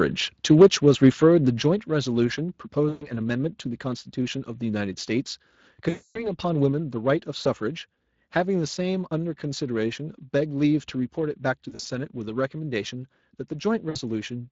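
Throughout the speech runs through the Speex codec, and its damage is plainly audible. The CELP coder has too few bits to model the excitation cleanly, so the voice has a hoarse, grainy roughness, which fits a Speex setting around 20 kbps. On a spectrogram the harmonics look smeared and noisy, and the region above 8 kHz shows diffuse, shaped noise rather than distinct structure.

From 0.51 to 0.66 s the loudest syllables break into a harsh crackle, likely microphone overload. The peaks run about 5 dB past the converter's limit, with roughly a tenth of the samples in that stretch flattened. A second, milder burst follows from 1.03 to 1.08 s, about 2 dB over, with a few percent of samples clipped. On the waveform both appear as flat-topped peaks, and the spectrogram shows vertical smears of added high-frequency energy.

At 0.62 s, inside that first distorted burst, voice and background drop together by about 3 dB, and at 1.62 s they drop again by about 5 dB. 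These are likely the microphone volume being stepped down by the call software after it detected the overload. On the waveform the envelope shrinks abruptly at each point, and the spectrogram darkens uniformly across all frequencies.

VoIP packet loss concealed by the speech codec interrupts the sound five times: 2.89 to 3.10 s (120 ms lost), 5.89 to 6.28 s (260 ms), 7.43 to 7.48 s (20 ms), 11.69 to 11.86 s (100 ms in short runs scattered over 160 ms, the longest 40 ms), and 13.89 to 13.97 s (60 ms). In each gap the decoder repeats its last pitch and filter with falling gain. The result is a stretched, buzzy tone or coloured noise that fades. On a spectrogram these show as frozen patterns that dim over time. The waveform shows a repetitive, tapering pattern, and the sound stays weak for a short while after each gap.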